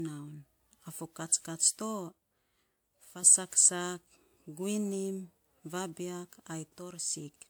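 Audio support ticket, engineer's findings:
Generation loss, whole clip. Swirly, hollow, smeared speech; attacks blurred; nothing above 20.1 kHz. Likely repeated lossy re-encoding, about four passes, consistent with a WMA 1 chain near 128 kbit/s. Each pass requantises on a shifted frame grid, so noise and spectral holes stack.

One channel drops out, 2.09–3.23 s, after "fo katskats to", until "saksak guinim vabiak". Also 6.79–7.13 s, after "saksak guinim vabiak". Abrupt level fall of about 6 dB. Likely one stereo channel lost upstream. The mono sum halves shared content.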